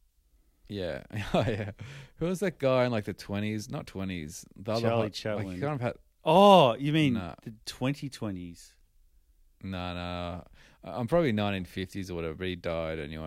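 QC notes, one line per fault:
No faults heard anywhere in this speech recording.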